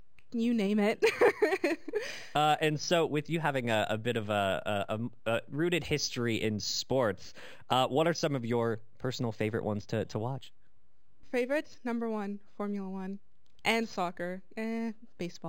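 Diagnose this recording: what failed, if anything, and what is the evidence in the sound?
Dulled highs and a faint metallic shimmer on sibilants throughout point to imaging from linear upsampling at sample-rate conversion, consistent with an 11 kHz source. Mirror images sit around 5.5 to 11 kHz, about 20 dB down.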